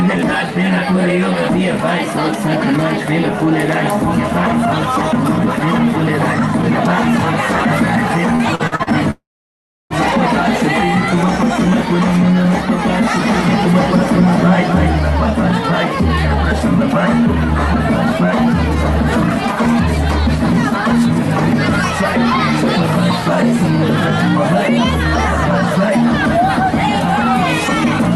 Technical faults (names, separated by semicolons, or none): repeated packet loss (robotic sound); long network dropout; doubled audio track